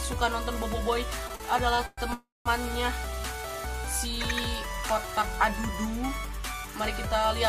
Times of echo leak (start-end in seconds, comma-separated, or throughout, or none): none